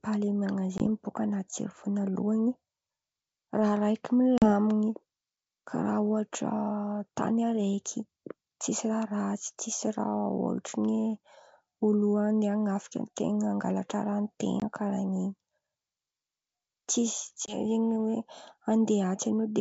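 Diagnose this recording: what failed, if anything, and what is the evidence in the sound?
Packet loss on an ADPCM call, at the network stage: hard-edged silent gaps of 20 ms at 0.78, 14.60 (after "angalatra raha") and 17.46 s, and 40 ms at 4.38 s (after "raha raiky"). The desynchronised predictor and step size make speech resume slightly distorted.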